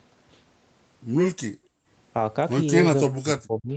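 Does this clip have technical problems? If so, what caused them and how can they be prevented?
Yes. Background gated by the echo canceller, 1.52 to 1.88 s: the canceller pulled the microphone down about 39 dB while the loudspeaker played. Tuning its suppression to be less aggressive prevents this.

Speech suppressed in double talk, 3.08 to 3.76 s: the speech drops by around 40 dB, likely because both sides talked and the canceller muted both. A better double-talk detector prevents this.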